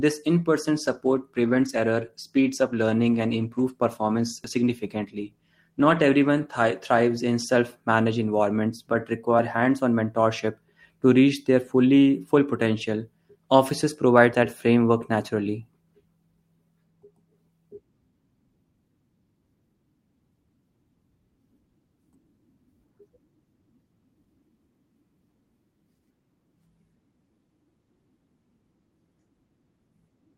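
From 0.8 s, just after "in person", the call bitrate drops: the bandwidth estimate fell and the encoder was pushed from 32 kbps down to 17 kbps, staying at that floor for about 5.5 s. With fewer bits per frame, the speech is coded more coarsely and sounds rougher and watery. This lasts until 7.86 s, when full quality returns just before "managed environments but".

Short skips with audio missing between chunks occur at 4.44, 9.39, 14.34, 24.24 and 29.19 s. The regular spacing of close to 5 s points to a recorder or processor that likely works in 5-second chunks and loses a sliver of sound at each handover. Around 50 ms disappears each time and the two sides butt together with no gap, so the speech jumps forward. One skip falls between "managed environments but" and "hands on mentorship to", and another comes just before "that framework naturally".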